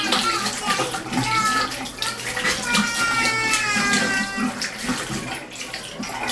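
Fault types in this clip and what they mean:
Nothing here needs flagging, since these sounds come through without any technical faults to point to.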